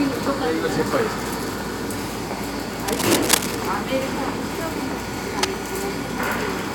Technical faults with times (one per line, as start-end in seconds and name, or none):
2.88-3.56 cable scratch noise
5.22-5.54 cable scratch noise